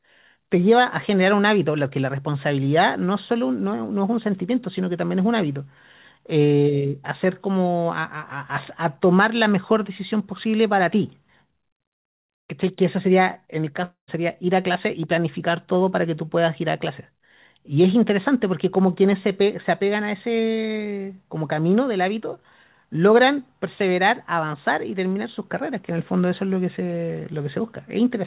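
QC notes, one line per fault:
13.84 to 14.10 s, long network dropout: the last sound smears into a fading buzz for roughly a quarter second, then briefly goes quiet, and the audio picks up again with a gap missing. This is likely a stall in packets arriving over the 4 kHz-limited G.711 call path.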